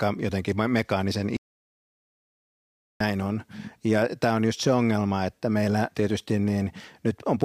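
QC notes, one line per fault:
1.37–3.00 s, audio dropout to silence: the speech cuts off mid-flow and the track falls to silence for about 1.64 s, with no room tone underneath. It then resumes abruptly at 3.00 s, again mid-flow. Whatever was spoken in that gap is lost. The dead-flat silence points to the input being lost while recording carried on writing silence, likely through a disconnected device, a failed link or an accidental mute.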